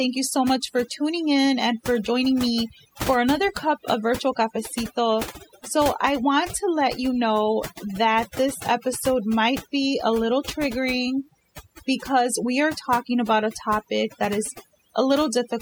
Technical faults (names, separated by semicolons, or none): overdone noise removal